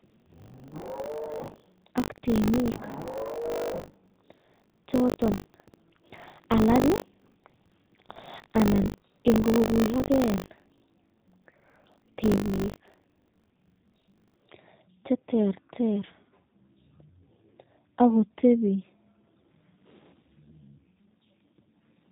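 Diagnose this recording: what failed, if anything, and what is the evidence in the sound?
G.729 codec damage runs through the whole speech clip, a codec-stage fault. The bandwidth stops at 4 kHz, and the speech sounds rough and synthetic, as expected when an 8 kbit/s G.729A encoder rebuilds each frame from a vocal tract filter, a pitch predictor and a handful of pulses.

Buffer tearing from 0.0 to 14.49 s is a driver or buffer stage fault. A 50 Hz robotic buzz rides on the speech, pointing to a buffer period of about 20 ms. The writer and reader have slipped, so roughly a tenth of each period replays audio from about 70 ms earlier, with hard joins.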